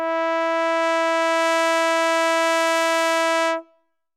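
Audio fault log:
No faults are heard in this music.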